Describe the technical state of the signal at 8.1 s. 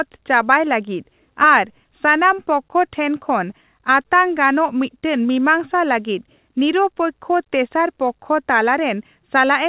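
At 8.1 s the speech signal is intact, with no dropout, glitch or other fault, only the narrow telephone band of the call path with nothing above 4 kHz.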